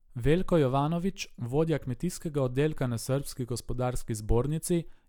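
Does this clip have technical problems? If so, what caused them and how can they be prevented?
No, nothing in this speech recording stood out as a technical problem on listening, so there is nothing to trace to a cause or to prevent.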